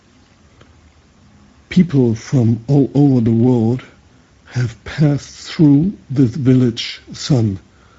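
Speech runs through the Speex codec for its whole length, with plainly audible coding damage: a hoarse, grainy texture where too few bits describe the excitation. The sound fits a mid-quality wideband setting near 16.8 kbps. A spectrogram shows a flat ceiling with nothing above 7.7 kHz.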